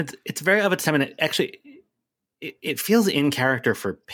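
No technical faults can be heard in the speech.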